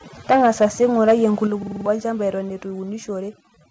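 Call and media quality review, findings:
Overdone noise removal, whole clip: background dropped and broken up into twinkling specks. Denoiser set too hard, shutting off individual bands near its noise estimate and taking quiet voice detail with them.

Microphone overload, 0.3 to 1.25 s: harsh, crackly edge on the loudest syllables, peaks around 7 dB over full scale with a fair share of samples flattened. Likely input gain too high, converter chopping the tops off the waveform.

Microphone volume stepped down, at 0.46 s by about 2 dB and at 1.47 s by about 6 dB: voice and background both drop suddenly in one step. Likely the call app's gain control reacting to the clipped peaks by lowering the device input.

System hang loop, 1.63 to 1.86 s: a 46 ms slice repeats five times, a stutter at 21.5 Hz, with roughly 200 ms of real audio gone. Driver or system stall while hardware kept cycling its ring buffer, which fits a 2048-sample buffer. 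G.722 call path cuts everything above 8 kHz.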